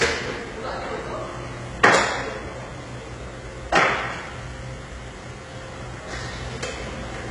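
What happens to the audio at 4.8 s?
At 4.8 s the treble sounds gritty and metallic, with nothing above 11 kHz, likely from heavy HE-AAC compression throughout, whose band replication rebuilds highs from copied lower bands.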